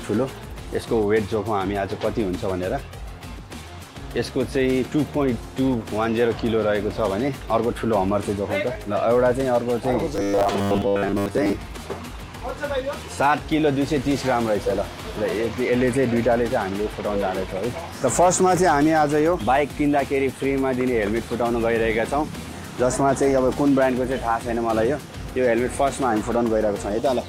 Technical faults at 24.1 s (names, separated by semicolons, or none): none